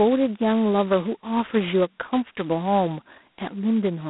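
Right from the start the speech has that G.726 ADPCM grind: a harsh, rasping hiss riding on every syllable and rising and falling with the level, which fits the 16 kbit/s mode. The band sits around 200 Hz to 3.5 kHz, with nothing above 3.9 kHz.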